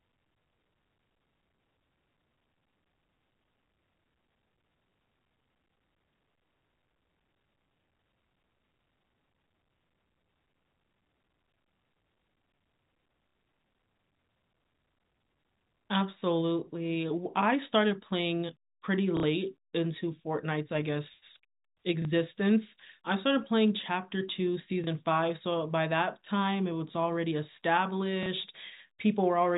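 At 13.29 and 19.17 s the speech stutters for 60 ms, and at 22.02, 24.84 and 28.23 s for 30 ms. This is packet loss with the last packet repeated, which fits 30 ms packets. Unlike a silent dropout, the two 60 ms gaps fill with a robotic buzz near 33 Hz, and each 30 ms gap with a small blip.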